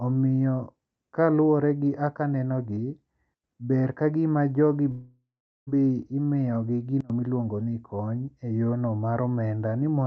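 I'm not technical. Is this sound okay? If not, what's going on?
No. There are two kinds of problem.

First, a sudden gain jump, twice: between 3.34 and 3.44 s, just before "ber kagima jogi", and again between 7.00 and 7.10 s, just before "miluongo ni". Each time the voice and the background hiss together drop abruptly to a much quieter level. It's likely caused by a volume setting being changed in one step instead of being eased in gradually.

Second, a long network dropout from 4.91 to 5.69 s, right after "ber kagima jogi". The last bit of sound is stretched into a fading buzz, then there is roughly 0.4 s of silence, and when the voice returns about three quarters of a second of speech is gone. The likely cause is that a run of data never arrived over the connection, so the receiver could only fill the gap.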